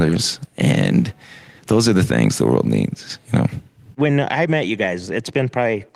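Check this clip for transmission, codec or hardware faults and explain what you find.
No faults can be heard anywhere in this speech recording. There is nothing to report at any point in it.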